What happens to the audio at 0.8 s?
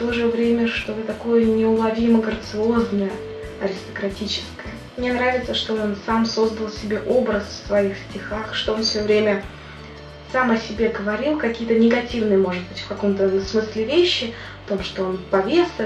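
Loose connector crackle breaks in from 0.81 to 0.88 s. A dirty contact makes and breaks rapidly, chopping the signal into a brief, irregular scratchy burst.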